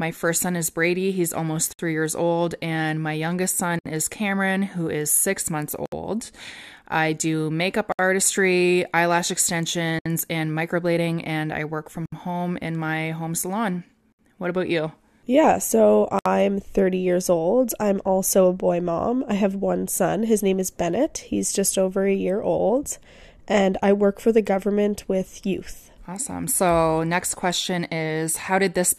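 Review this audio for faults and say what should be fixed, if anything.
There's a gap at a join of encoded pieces roughly every 2 s: about 65 ms silences at 1.73, 3.79, 5.86, 7.92, 9.99, 12.06, 14.12 and 16.19 s, from encoder delay and last-frame padding left in. Trim each piece's priming delay and padding, or encode the whole thing in one pass.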